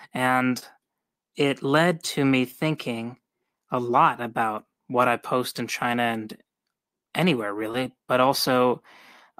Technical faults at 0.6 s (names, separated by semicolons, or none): short concealed packet loss